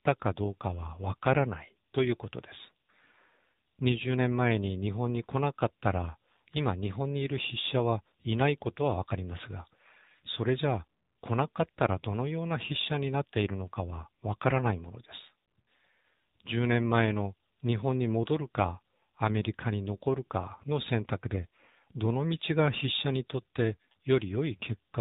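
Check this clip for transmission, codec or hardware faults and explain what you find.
There is one fault, and it runs through the whole clip: AMR narrowband mobile codec. The speech is squeezed into an 8 kHz-sampled channel, so nothing above 4 kHz survives. The codec rebuilds each 20 ms frame from a vocal-tract model excited by a handful of pulses, and at this level of plainly audible damage the voice turns buzzy and synthetic, which fits a low mode of about 7.4 kbps. A simple telephone band-limit would sound muffled but natural; here the voice texture itself is artificial.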